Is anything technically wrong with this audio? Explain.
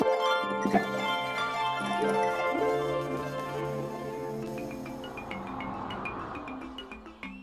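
No, nothing technically wrong turns up anywhere in this audio.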